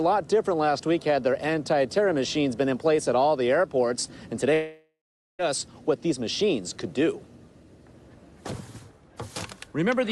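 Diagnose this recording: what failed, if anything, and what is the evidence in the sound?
From 4.53 to 5.41 s, a long network dropout is the likely cause. The last sound is extended as a fading buzz or hiss, then 0.41 s of silence, and audio resumes with 0.86 s missing. A simple mute would neither continue sound nor skip content.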